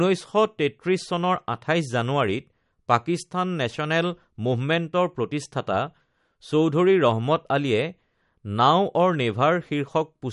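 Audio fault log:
Throughout, MP3 compression: the speech sounds watery and swirly with smeared consonant attacks, likely from a low bitrate around 48 kbps starving the encoder of bits.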